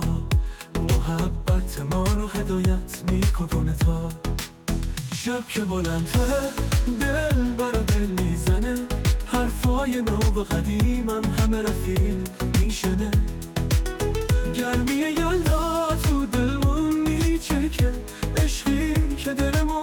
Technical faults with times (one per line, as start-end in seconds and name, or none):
none